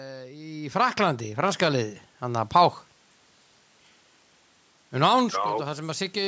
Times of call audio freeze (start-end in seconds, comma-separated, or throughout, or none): none